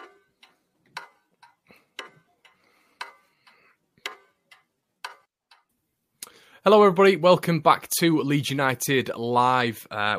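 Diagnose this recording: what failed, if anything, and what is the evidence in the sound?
Nothing in this speech recording points to a failure at any stage of the chain. No event in the sound ties a problem to the wiring, the converter, buffering, processing, the network, storage or playback.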